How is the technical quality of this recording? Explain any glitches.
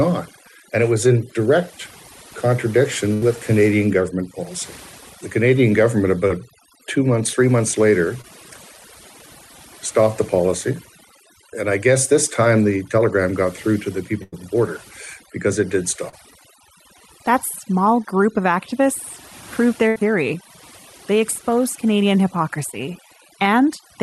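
The quality is fairly rough, with heavy processing throughout and six dropouts. It sounds like a call, with the top end stopping around 12 kHz.

Overdone noise removal runs the whole way. The denoiser is clamping bands near its noise estimate, so the background goes to twinkly near-silence.

There's a burst of packet loss at 3.13–3.23 s, 14.23–14.34 s after "got through to the", and 19.88–19.97 s after "group of activists proved". Each time roughly 80 ms never arrived, so the receiver stretched the last sound into a fading buzz or hiss and then jumped ahead.

Short concealed packet loss shows up at 6.27–6.32 s, 8.22–8.25 s after "months three months later", and 16.09–16.14 s. Holes of about 20 to 40 ms were patched by extrapolation, giving a quick smear or wobble.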